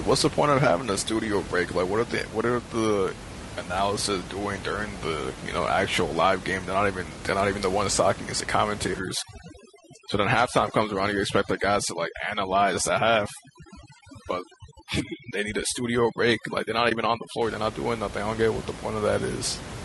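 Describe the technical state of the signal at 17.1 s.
At 17.1 s you're inside a stretch of overdone noise removal that runs from about 8.99 s to 17.42 s. A noise suppressor pushed too hard is clamping individual frequency bands whenever they sit near its noise estimate. The room noise, which is about 13 dB below the speech, drops and breaks up into little twinkling specks, and the quieter parts of the voice get pulled down with it.

Layered on top of that, all the way through, is a rough, grainy texture that is plainly audible. There's noise creeping in between the pitch harmonics and a top end that sounds lowered or synthetic. That's most likely low-delay AAC compression, AAC-ELD, the kind used for video calls, and the damage fits a rate around 32 kbps. At that low bitrate the coder can't spend enough bits to code the harmonics cleanly, so the voice comes out coarse.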